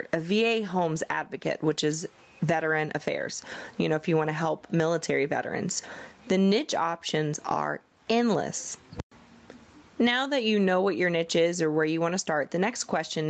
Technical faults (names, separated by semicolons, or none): gain pumping